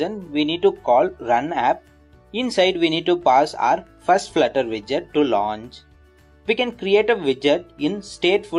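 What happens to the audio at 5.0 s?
Nothing goes wrong at 5.0 s; the audio plays through that moment intact, with no dropout, glitch or distortion.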